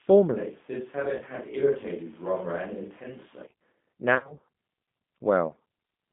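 A speech recording heard through a narrow, slightly rough and synthetic-sounding line: everything sits between roughly 150 Hz and 3.6 kHz. That combination points to the G.729 codec, whose plainly audible damage fits an 8 kbit/s G.729A link. It rebuilds the voice from a vocal tract filter, a pitch predictor and a few pulses per frame rather than sending the waveform itself. The clip also has two moments where the voice briefly smears into a stretched sound that fades. The first is short, from 1.17 to 1.23 s. The second is longer and more broken up, from 4.15 to 4.36 s. In it, about 110 ms of audio is missing, scattered across 160 ms, with the longest gap about 60 ms. This is VoIP packet loss concealed by the speech codec. The first dropout fits two lost 10 ms frames. For each missing frame, the decoder repeats its last pitch and filter at falling gain. Because each frame depends on the previous one, the voice stays weak or distorted for a little while after packets resume.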